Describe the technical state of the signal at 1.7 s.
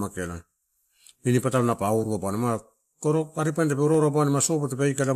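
Dropped samples at 1.72 s: a single sharp click cuts through the speech, seen as a thin vertical line across the spectrum. It is likely caused by a tiny fraction of a millisecond going missing, so the waveform jumps abruptly to a later value without losing audible sound.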